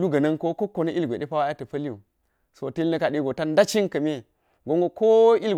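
No technical faults are audible.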